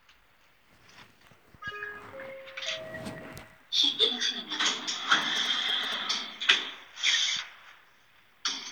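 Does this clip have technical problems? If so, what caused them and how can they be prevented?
Yes. Between 5.22 and 5.94 s there are GSM signalling bursts. A 2G phone near the recording chain sent short groups of radio bursts while signalling, and the audio circuitry rectified that RF energy into the signal path. It comes through as a galloping dit-dit-dit of short buzzes at the 217 Hz burst rate, roughly 10 dB below the main sound. Keeping phones switched off or in flight mode and well away from microphones, cables and interfaces prevents it.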